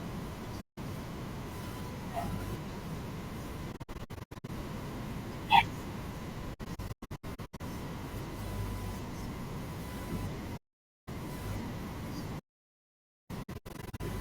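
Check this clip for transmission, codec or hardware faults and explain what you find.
Two kinds of fault turn up: repeated AAC frame loss with muting, and one hard audio dropout to silence.

AAC frame loss with muting hits at 0.60–0.78 s, 3.72–4.50 s, 6.53–7.61 s, 10.57–11.09 s and 13.42–14.01 s. The decoder zeroes the missing frames, and the overlapping windows fade the speech out and back in, leaving soft-edged holes. The first and fourth are single gaps of about 0.17 s and 0.51 s. The others are clusters of short holes, each no longer than roughly a tenth of a second.

The audio dropout to silence runs from 12.40 to 13.30 s. Speech cuts abruptly to dead silence for about 0.9 s, with no room tone. It's likely a lost input or link while the recorder kept writing silence.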